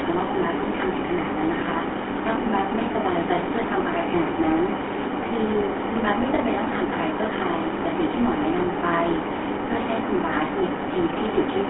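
From start to finish, the speech carries the sound of the GSM full-rate codec. This old mobile-phone coder keeps a model of the vocal tract and excites it with a thinned, regular pulse train. That crude excitation gives a buzzy, gravelly roughness, and here the damage is plainly audible. The band runs from about 250 Hz to 3.4 kHz. Nothing survives above 3.8 kHz. The result fits a 13 kbps stream.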